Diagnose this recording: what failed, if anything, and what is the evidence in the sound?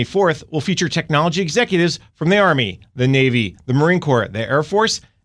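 Nothing in the signal chain audibly failed: the speech holds a steady level and continuous timing throughout, with no break, distortion or processing fault to point to at any stage.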